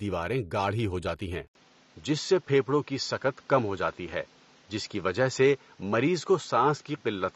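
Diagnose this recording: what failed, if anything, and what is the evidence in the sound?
At the codec stage, the speech carries plainly audible AAC compression damage throughout, likely from AAC-LC coding. Nothing survives above 12.4 kHz, and the band below is smeared, with a warbling, fizzy edge on sibilants. A spectrogram would show a hard horizontal ceiling at 12.4 kHz and patchy, flickering holes in the upper bands, where the quantiser starved frequency lines of bits. That damage fits a low bitrate of around 32 kbps.

At the capture stage, the input switched to a poorer device at 1.47 s and stayed on it to the end. On the waveform, an 80 ms gap of silence marks the switch, and the level is about the same either side of it. From there the audio turns duller and boxier. On the spectrogram the ceiling drops abruptly from 12.4 kHz to 7.6 kHz, and a new noise floor appears roughly 35 dB below the signal. 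The likely cause is a narrower-band microphone or headset call profile taking over.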